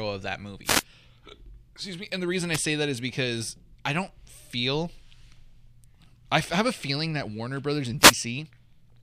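Three wireless microphone noise hits break into the speech. The first runs from 0.64 to 0.83 s, just after "of that". The second is a brief one from 2.53 to 2.58 s, between "the reason" and "say that is because". The third falls at 7.99 to 8.15 s. Each is a short swish of static. The radio link from the microphone fades as reflected paths cancel the carrier, and the receiver's own noise surges over the voice. On a spectrogram each shows as a broadband vertical smear of hiss washing across the harmonic bands. On the waveform it appears as a ragged, noisy patch.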